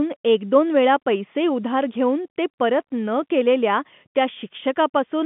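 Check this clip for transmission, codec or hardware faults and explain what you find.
No transmission, codec or hardware fault can be heard in this speech. The telephone coding, G.711 mu-law, is audible as a narrow line band running from about 150 Hz up to about 3.5 kHz, with nothing above it.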